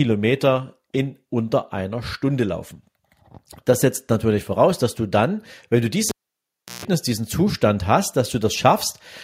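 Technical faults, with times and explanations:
6.09 to 6.85 s, cable pulled and plugged in: a live cable was pulled out and pushed back in, breaking the signal path for about 0.71 s. The break starts with a pop as the connection snaps open, then the speech drops to near silence. On reinsertion the plug tip touches first, so a 149 ms burst of 60 Hz mains buzz leaks in before full contact, and a second pop marks the sound returning.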